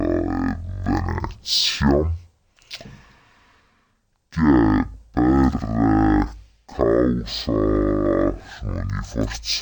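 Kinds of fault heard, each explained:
Stereo read as mono: The left and right samples of a two-channel stream are being read in sequence as if they belonged to one channel, so each stereo frame is taken as two consecutive mono samples. Across the whole clip this stretches the sound to half speed and lowers it a full octave, twelve semitones, giving a slow, heavy, dragged character with every event lasting twice as long as it should.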